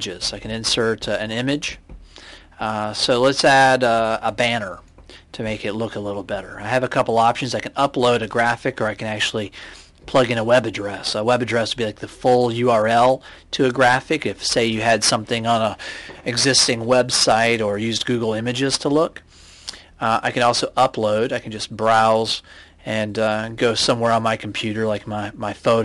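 No technical faults can be heard anywhere in this recording. There is no moment in the audio that calls for a timestamp or a fix.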